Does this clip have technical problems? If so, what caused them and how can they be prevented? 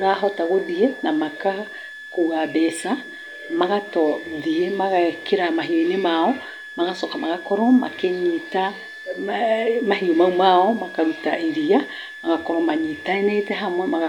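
Yes. A thin whistle sits under the speech for the whole clip, wandering between about 1.67 and 1.75 kHz, roughly 15 dB below the voice. This is switching supply whistle, from a nearby power converter cycling audibly as its load shifts. Use a linear or well-filtered supply and keep adapters away from the microphone.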